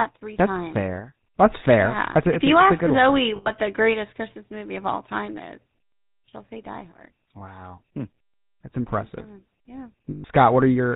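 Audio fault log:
throughout, GSM full-rate codec: the speech has a buzzy, gravelly roughness, plainly audible, and a muffled top, which fits the 13 kbps full-rate coder. It models the vocal tract and drives it with a coarse, regularly spaced pulse excitation that keeps only a fraction of the detail, so voicing turns grainy. On a spectrogram the energy stops at a hard ceiling at 4 kHz, and the harmonic stripes look smeared and noisy rather than clean.
3.36–3.51 s and 10.10–10.25 s, lost GSM frames: the sound freezes into a rough, metallic ring for 100 ms and then 140 ms. The decoder replaced the missing frames by repeating the parameters of the last good frame, so the same spectral shape rings on instead of following the speech. A spectrogram shows a flat, unchanging band. The waveform keeps a steady, repetitive pattern.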